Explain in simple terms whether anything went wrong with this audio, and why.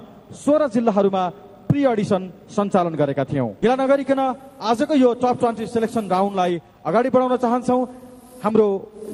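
Two things go wrong here, both close together. At about 3.62 s there's a skip ahead: a chunk of roughly a third of a second never made it to playback, so the audio just jumps forward. Nothing fills the hole and there's no pause; the sound from before the gap is stitched straight onto what comes after. That happens when a stretch is lost in transit or thrown out because later audio was already queued up.

Right after that, from 4.19 to 4.58 s, you get a jitter buffer speed-up. The receiver was holding more audio than it wanted, so it trimmed lots of tiny slices, each just one or a few pitch cycles long, one after another to catch up. In total that removes only a few hundredths of a second, but that stretch plays at 108% speed with the pitch unchanged, which is fast enough to sound hurried.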